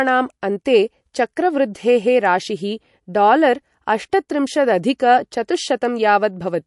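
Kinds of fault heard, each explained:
MP3 compression: The speech has plainly audible codec damage throughout, with nothing above about 11.3 kHz. The treble is cut off cleanly and s sounds turn watery and swirly as weak frequency components flicker on and off. The likely cause is MP3 encoding at a low bitrate, around 48 kbps. On a spectrogram this appears as a flat ceiling near 11.3 kHz with patchy, blinking holes in the upper bands where content drops out from one frame to the next.
pre-echo: At 1.36 s a sharp attack is preceded by a brief hiss lasting about 11 ms, and the attack itself sounds softened. The encoder spreads its quantisation noise across the whole transform block, so noise sized for the loud onset also fills the quiet moment just before it. On a waveform a thin fuzz of noise sits ahead of the transient, and a spectrogram shows a broadband smear leading into the onset.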